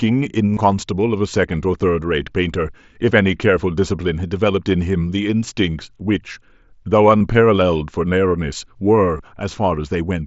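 Concealed Bluetooth headset packet loss in this speech clip at 0.54–0.61 s, 1.92 s, 7.18–7.21 s and 9.18 s: dropped headset packets are patched by repeating recent waveform, leaving brief buzzy glitches over the wideband mSBC link, though the single lost packet at 1.92 s is nearly hidden.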